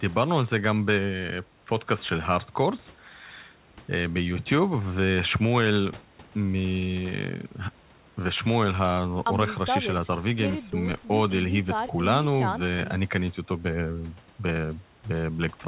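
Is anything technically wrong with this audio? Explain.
No, the speech comes through a narrowband call path that carries nothing above 4 kHz, with the room's background noise sitting about 31 dB below it, and nothing in the signal is technically wrong.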